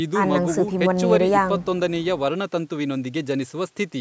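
Nothing stood out on listening to this speech, which shows only the expected trimming of the lowest bass from the call microphone's processing.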